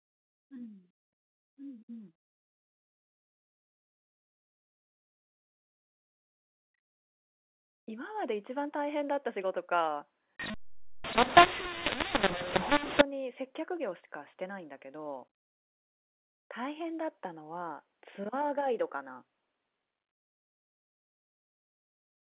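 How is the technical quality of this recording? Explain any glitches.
The recording has one clear glitch in its telephone-band speech, which is limited to 4 kHz, consistent with G.711 mu-law coding. From 10.40 to 13.01 s, mu-law and A-law are mixed up: samples encoded with mu-law are decoded as A-law, so every level maps to the wrong value. Loud parts turn harsh and distorted, quiet ones jump in level, and near-silent gaps fill with noise.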